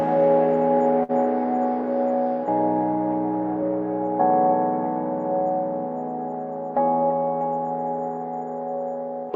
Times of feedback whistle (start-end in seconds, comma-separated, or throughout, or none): none